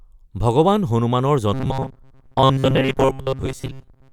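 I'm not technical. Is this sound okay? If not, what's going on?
No. Robotic sound from repeated short buffers starts at 1.54 s, right after "ভগৱান হনুমানৰ", and lasts until 4.12 s. The speech turns into a stiff, metallic buzz at about 133 Hz. That pitch fits a tiny slice of sound, roughly 7.5 ms long, being replayed over and over. The likely cause is new audio arriving too slowly, so the software keeps repeating the last slice, and most of the real sound in that stretch is skipped.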